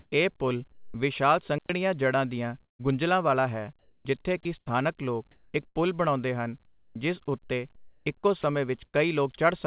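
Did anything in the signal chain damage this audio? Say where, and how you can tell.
Yes, there are faults at several points, all in the call processing and transmission stages. The narrow bandwidth, with nothing above 4 kHz, fits a G.711 A-law call path at 64 kbps.

Comfort noise in place of the background, 0.00 to 0.94 s: the opening background is a smooth, featureless hiss, without the texture of a real room, for about 340 ms of its length. This is likely discontinuous transmission at the call-processing stage. The sender's voice detector judged the stretch silent and stopped sending, and the receiver synthesised a rough spectral match of the background in its place.

Onset clipped by the voice detector, 0.91 to 0.94 s: the speech begins abruptly, as if its soft attack were missing, and about 30 ms of the start is gone. The likely cause is the same detector reacting late. Transmission resumed only after the sound was already under way, and comfort noise covered the lost beginning.

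Digital wireless dropout, 1.58 to 1.70 s: a clean hole of near silence, about 112 ms long, with no crackle or noise burst at either edge. That clean mute points to a digital wireless link losing too much data. The receiver faded the output down rather than play corrupted audio, then brought it back once the link recovered.

Burst of packet loss, 2.64 to 2.81 s: the last sound is held and fades away over about 150 ms. It drops to near silence for much of that time, and when the audio returns, about 160 ms of the speech has been skipped. This is a network fault. Several consecutive packets were lost or arrived too late, and the receiver's concealment stretched and attenuated what it had until fresh data arrived further along.

Sound chopped by the voice detector, 3.79 to 5.76 s and 6.66 to 8.95 s: the speech turns choppy, with syllable edges and quiet stretches dropping out. The background flickers between real room sound and flat synthetic hiss, with about 670 ms and 695 ms replaced. 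The likely cause is a voice detector toggling transmission on and off repeatedly, at the call-processing stage.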